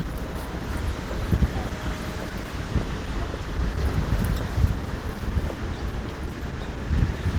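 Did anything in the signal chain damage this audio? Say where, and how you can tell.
Yes. Opus compression is audible from start to finish, and it points to the codec stage. The sound has a hoarse, grainy roughness, and tonal parts turn noisy rather than swirling. That texture fits the encoder running in its hybrid mode, which is likely the result of a starved bitrate somewhere around 16 kbps. The encoder keeps band energies but fills detail with noise, so the bandwidth is still fullband while the fine structure is coarsened.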